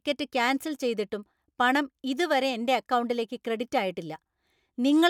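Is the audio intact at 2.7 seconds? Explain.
Yes, the speech is intact at 2.7 seconds, with no dropout, click, distortion or other fault at that moment.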